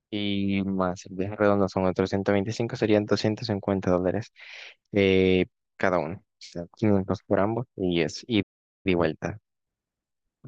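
At 8.42 s the speech cuts off mid-flow. A playback stall follows. The output drops to silence until 8.86 s, a gap of a little over 0.4 s. The cause is likely the player running short of data or its thread being held up, so nothing reached the output during that time. When sound returns, it resumes abruptly. The break is clearly audible as a dead pause inside continuous speech.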